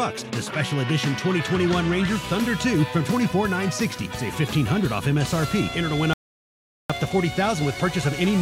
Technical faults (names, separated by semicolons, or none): playback stall